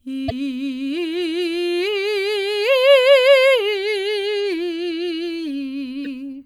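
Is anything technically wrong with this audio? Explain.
Yes, the music has two brief faults from damaged data in a compressed stream, at 0.28 to 0.32 s and 6.02 to 6.07 s. Corrupted bytes make the decoder misread frames and resync, leaving a short chirp or blip each time.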